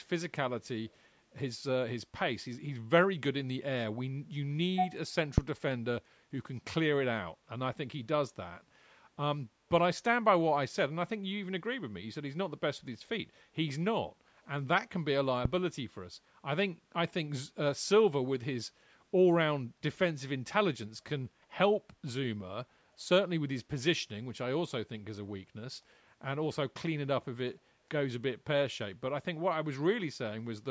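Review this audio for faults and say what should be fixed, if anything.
At 0.86 to 0.97 s and 8.58 to 8.62 s, a brief delayed copy of the speech returns about 234 ms late, well below the main level. This is likely an echo leak. A far-end loudspeaker fed its own playback into its microphone, and the echo canceller let some through. Tuning or enabling echo cancellation on the loudspeaker side, or using a headset there, would prevent it.

A phantom power thump occurs at 5.38 to 5.58 s and again at 15.45 to 15.62 s. Each is a deep low thud. It dies away in about 46 ms and 38 ms respectively. A supply was switched on a live input. The voltage step passed through the coupling capacitors. Muting the channel before switching phantom power would prevent it.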